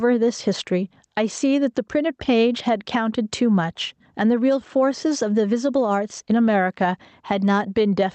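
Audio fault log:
throughout: gain pumping. The gain ducks by around 10 dB under loud speech, likely from the mic gain being set too high and driving a fast limiter.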